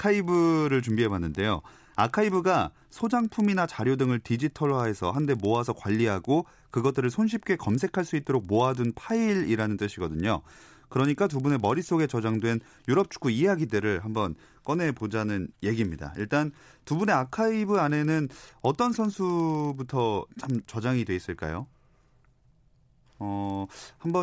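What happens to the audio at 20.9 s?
At 20.9 s the resampler restarted on every block, as it does throughout. Each 50 ms block converts from 48 kHz to 16 kHz alone, leaving edge errors heard as a 20 Hz buzz under the speech.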